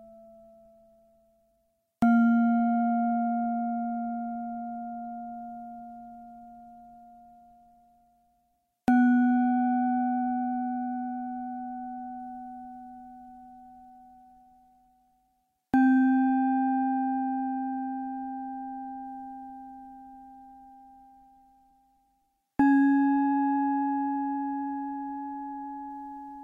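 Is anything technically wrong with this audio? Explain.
No, nothing in this recording stood out as a technical problem on listening.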